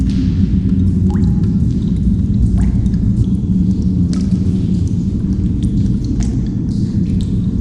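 The whole clip sounds dull and gurgly, with granular grit. That's likely MP2 compression at a low rate, around 80 kbps, with upper bands dropping out and flickering.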